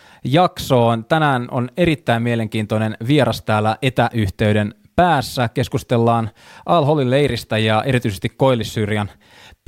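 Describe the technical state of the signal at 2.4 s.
At 2.4 s the speech signal is intact, with no audible fault at that moment.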